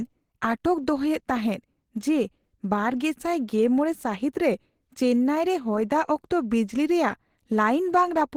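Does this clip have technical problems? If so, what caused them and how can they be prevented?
Yes. Opus compression damage is plainly audible throughout the speech. It is likely from an Opus encoder in hybrid mode at a low rate, about 16 kbps. It sounds hoarse, rough and grainy rather than swirly like MP3, and the bandwidth stays open up to 20.2 kHz. Encoding at a higher bitrate would prevent it.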